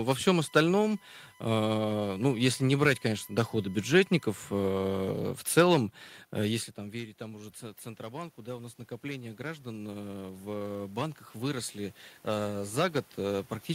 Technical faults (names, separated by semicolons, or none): USB whine; automatic gain rising